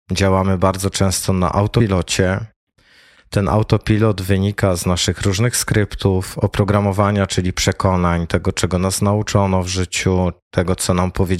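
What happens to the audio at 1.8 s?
At 1.8 s you get compressed frames skipped. The sound jumps ahead by roughly 150 ms, which points to about five missing frames of around 26 ms each. Since neighbouring frames overlap, the join comes out as a quick smeared blip rather than a hard click.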